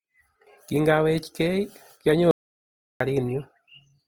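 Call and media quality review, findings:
Opus compression throughout, whole clip, speech: grainy, rough texture on tonal parts; codec damage plainly audible. Likely an Opus encoder in its CELT music mode, at a rate that points to about 24 kbps. Band energies are kept and starved bands are filled with folded or noise content. That is why it sounds grainy rather than swirly like MP3: there are few warbling spectral holes. Bandwidth is still fullband, reaching about 20.2 kHz, so it is not muffled.

Audio dropout to silence, 2.31 to 3.00 s, about 0.69 s lost: speech cuts out mid-flow and returns abruptly. Likely the input was lost upstream (link, device or mute) while the encoder kept writing silence. Unlike a noise gate or packet-loss concealment, the gap is silent with no room tone, no fade and no smeared fill.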